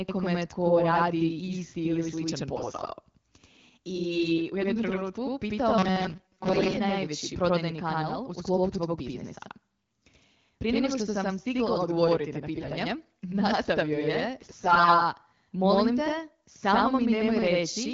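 The whole clip carries a channel delay doubling. Every bit of speech comes back as a second copy about 85 ms late at the same level, so you hear a steady slap echo behind everything. That's what you'd get if one channel ran a long buffer behind the other before the two were folded to mono. The gap fits a 4096-sample buffer.

From 2.52 to 2.91 s, right after "radi isti ili sličan", AMR bit errors show up. The speech roughly holds its pitch and level but goes hoarse, scratchy and gargly. The less protected bits in the frames arrived flipped, at somewhere around 5 percent, while the check on the important bits still passed. So the pulses and the finer pitch, gain and spectrum values land wrong.

Between 5.78 and 6.77 s the sound turns into robotic sound from repeated short buffers. A rigid, metallic buzz at 188 Hz sets in and only loosely follows the original. The likely cause is audio arriving too seldom, with the software looping a snippet of about 5.3 ms to cover the gap. 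Most of the real audio in that stretch gets skipped.

The AMR bit errors come back twice more. From 12.56 to 12.72 s, after "sam stigla odgovoriti na", they're brief. From 14.40 to 15.00 s, between "nastavio je" and "molim te samo", they last longer. Both times the error rate is roughly 10 percent. Underneath it all, the AMR-WB coding points to 12.65 kbit/s and adds only light codec damage.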